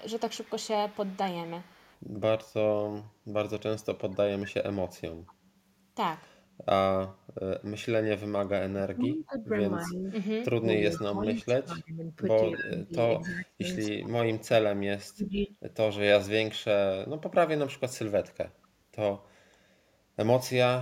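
A faint echo leak repeats the speech about 237 ms late, at 0.0–1.98 s and 4.12–5.33 s. It sits about 30 dB down. An echo canceller at the far end likely left loudspeaker pickup in. It returns at 7.64–11.03 s, louder, about 20 dB down.

From 8.32 to 15.51 s comes speech suppressed in double talk. The talker dips by up to about 25 dB, around four seconds in all. The canceller likely turned down its own talker along with the echo during overlap.

Echo returns at 12.55–13.32 s, only about 10 dB down. Brief scraps follow at 15.36–15.44 s and 18.63–18.68 s, the last about 40 dB down.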